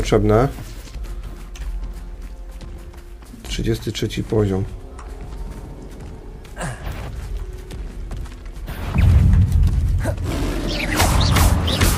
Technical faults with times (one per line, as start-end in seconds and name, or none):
none